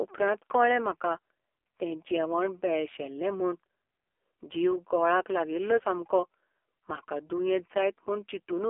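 From start to finish the speech carries the sound of the AMR narrowband mobile codec. The band is squeezed to roughly 300 Hz to 3.4 kHz, so it sounds thin and boxed-in. Heavy coding damage gives a buzzy, synthetic edge, which fits one of AMR-NB's lowest modes, near 5.9 kbps. A spectrogram shows a hard ceiling with nothing above 4 kHz, little energy below 300 Hz, and smeared, blocky harmonics in 20 ms steps.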